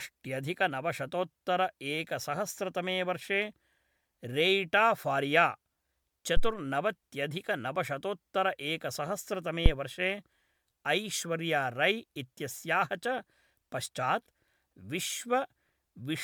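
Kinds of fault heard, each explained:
Generation loss: The speech was likely decoded and re-encoded with a lossy codec several times, around five passes, each quantising on a shifted frame grid. The voice sounds swirly, hollow and smeared, with blurred consonant attacks, worse than a single MP3 encode near 128 kbit/s would leave.
Phantom power thump: A supply being switched on a live input sends a voltage step through the coupling capacitors. This produces deep low thumps at 6.37 s, lasting about 0.15 s and decaying over 34 ms, and at 9.66 s, lasting about 0.06 s and dying away within 14 ms.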